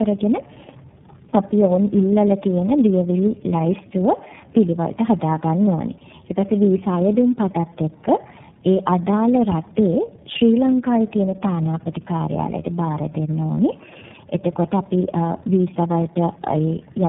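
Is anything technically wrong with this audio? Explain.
Yes. Tandem speech coding runs throughout the speech. The sound points to three low-rate speech codecs in a row, such as GSM, G.729A and iLBC. Each re-encodes the last one's damage. The voice is rough, muffled and warbly, with nothing above 3.8 kHz.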